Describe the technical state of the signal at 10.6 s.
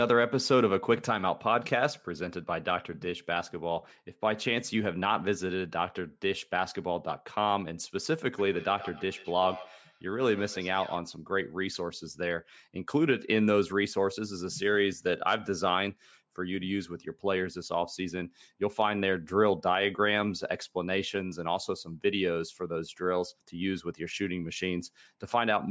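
At 10.6 s there is feedback echo between two devices, running from 8.38 to 11.09 s. A second device on the call replays this microphone's sound, which is picked up again. Echoes return about every 150 ms, peaking about 16 dB below the speech.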